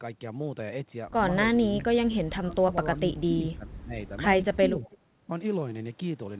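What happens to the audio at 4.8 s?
Speech suppressed in double talk runs from 4.58 to 5.29 s. The speech dips by as much as about 20 dB, most likely because an echo canceller mistook overlapping talk for echo. An echo leak lands between 4.86 and 4.97 s: a faint copy of the speech, roughly 30 dB down and delayed 435 ms, likely slipped past the far-end canceller.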